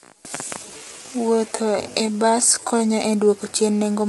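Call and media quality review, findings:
Low-delay AAC compression, throughout: speech rough and grainy, noise filling gaps between harmonics, nothing above 11.6 kHz. Likely AAC-ELD codec. Short frames resolve pitch harmonics poorly, and damage level fits a 32 kbps rate.

Time-stretched section, 0.00–2.86 s: speech slowed to 0.71x speed with pitch held. Pace jumps abruptly to normal at "e dwoko chien". Stretch software likely repeated short segments to lengthen duration without shifting pitch.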